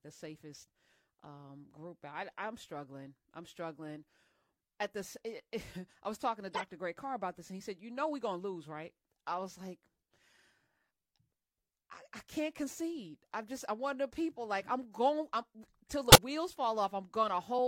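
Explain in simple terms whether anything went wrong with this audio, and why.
Corrupt frame decoded at 0.54 s, 6.52 to 6.64 s, 14.37 s and 16.10 to 16.16 s: damaged chunks of compressed speech were played anyway, so sound landed at wrong pitches, giving brief chirps or blips, loudest near 16.1 s and faintest at 0.54 and 14.37 s.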